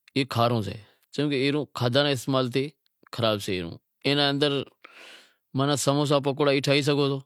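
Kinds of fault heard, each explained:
No technical faults can be heard; the signal holds steady with no breaks, level jumps or added noise at any point.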